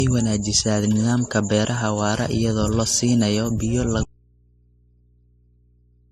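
From the start, the speech carries the mixed artefacts of transcoding between lossy codecs. Nothing is heard above 14.5 kHz. Two codec signatures sit together. The likely cause is a chain, such as an AAC stage followed by Opus, both at modest bitrates. The second encoder wasted bits on the first one's damage and added its own.

At 4.03 s, just after "iyadoo la siinayo biyo", an audio dropout to a faint residue begins. The speech cuts out abruptly, mid-flow. It is not a pause or a fade. What remains is a low mains hum, roughly 35 dB below the speech level. It lasts to the end. The likely cause is a lost input while the path after the break stayed live, passing only hum from the open input.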